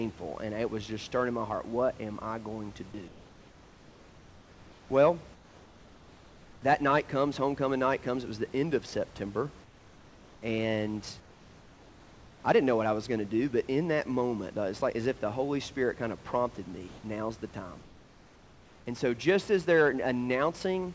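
In the pauses at 3.08–4.90 s (after "am I going to"), 5.34–6.62 s (before "that night comes homecoming"), 9.64–10.42 s, 11.20–12.44 s (before "I didn't know what"), 16.88–17.04 s and 17.82–18.86 s, the room tone, sitting about 26 dB under the loudest speech, turns into a flat, featureless hiss about 3 dB quieter (about 1 dB in the brief 16.88 s gap). This is comfort noise in place of the background, likely because discontinuous transmission stopped sending audio and the receiver synthesised a smooth stand-in until the speech resumed.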